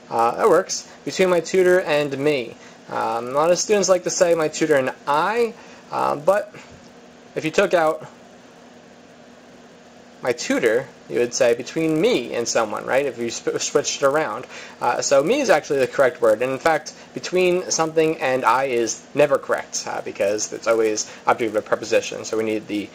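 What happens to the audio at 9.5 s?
At 9.5 s you're hearing the resampler restarted on every block, a fault that runs through the whole clip rather than a one-off event. The conversion from 16 kHz up to 48 kHz is being done on each 10 ms block in isolation, so every block edge gets a small error from missing neighbouring samples. With blocks that short, those errors merge into a 100 Hz buzz riding along with the signal, and it drops away when the sound goes quiet.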